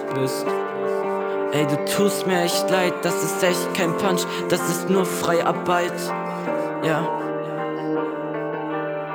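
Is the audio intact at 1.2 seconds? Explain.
No. Imaging from linear upsampling runs through the whole clip, including 1.2 s. Raising the rate from 22 kHz to 44.1 kHz by straight-line interpolation leaves a mirrored copy of the spectrum from 11.03 to 22.05 kHz, roughly 25 dB down. On a spectrogram it appears as a faint reflected band above a dulled top octave, heard as a light metallic shimmer.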